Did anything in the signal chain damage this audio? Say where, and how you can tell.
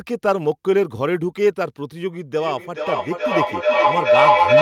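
Yes: feedback echo between two devices in call processing from 2.4 s, speech recurring about every 0.4 s and piling up to about 7 dB louder, each microphone recapturing the other's playback.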